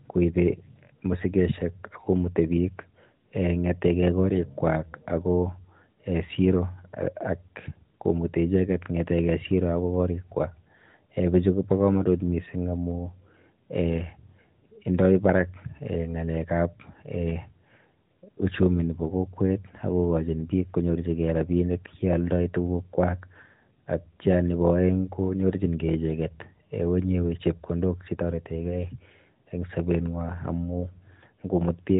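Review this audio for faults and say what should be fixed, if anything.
No faults; nothing to fix.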